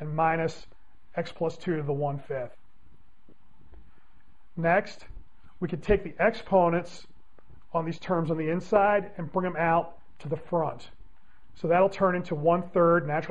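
Nothing is technically wrong with this clip.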